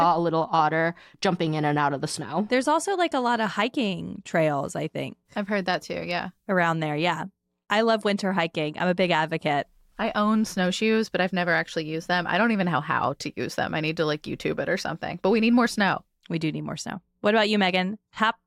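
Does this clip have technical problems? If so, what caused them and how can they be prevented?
No, nothing technical goes wrong anywhere in this speech recording, so there's nothing here that needs fixing or preventing.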